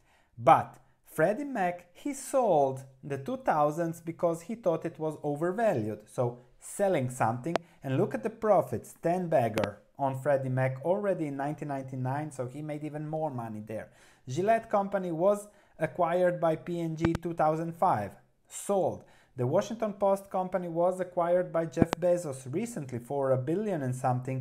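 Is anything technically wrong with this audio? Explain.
Yes, there are loud pops. A sudden voltage step or pulse, likely from a plug, switch, static discharge or driver glitch, jumps into the signal path and the audio underneath carries on. You hear it as a sharp pop at 7.56–7.58 s and as double pops at 9.58–9.66, 17.05–17.17 and 21.82–21.95 s, each about 20 to 25 dB above the surrounding sound.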